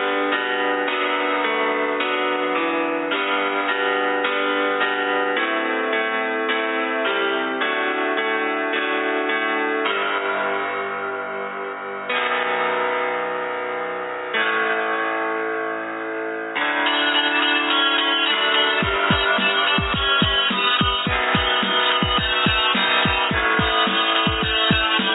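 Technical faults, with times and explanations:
No technical faults can be heard anywhere in the clip. There is nothing to mark with a time or to explain.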